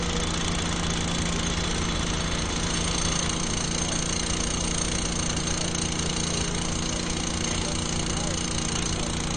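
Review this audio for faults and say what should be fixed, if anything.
Throughout the clip there's nothing above 9.1 kHz, and the sound has a plainly audible watery, swirly quality. That's likely MP3 compression squeezed to a low bitrate, around 40 kbps, so the encoder chops the treble and lets weak frequency lines flicker between frames. Fix: go back to the uncompressed source, or re-encode at a much higher bitrate.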